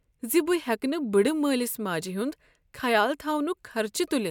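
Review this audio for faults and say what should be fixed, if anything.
No faults found in the speech; nothing to fix.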